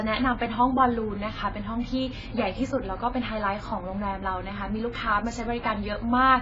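AAC compression damage runs throughout the speech: nothing is present above about 7.5 kHz, so it sounds dull, with smeared sibilants and a warbling, fizzy texture. The cause is likely heavy AAC-LC coding, which fits a very low bitrate near 16 kbps.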